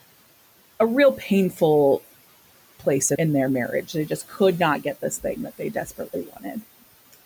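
A speech recording with a switching supply whistle running through its full length: a thin, high tone wandering between 12.9 and 14.1 kHz, roughly 25 dB below the speech. A spectrogram shows it as a narrow, slightly drifting line near the top of the band. It comes from a switching power supply operating in an audible burst mode or beating with another supply. There are also two spots of speech cut by the noise suppressor, where it mistook parts of the speech for noise. From 1.52 to 1.61 s the sound dips by about 8 dB. Between 5.58 and 6.63 s, around a third of a second in total is pulled down by up to about 14 dB. In both places the sound turns swallowed and faint. The waveform shows sudden notches in the envelope, and the room noise sits about 21 dB below the speech.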